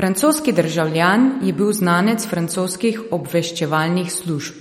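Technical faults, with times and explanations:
Throughout, MP3 compression: the speech sounds plainly watery and swirly, with nothing above 16 kHz, likely an encoder starved of bits, which fits roughly 46 kbps.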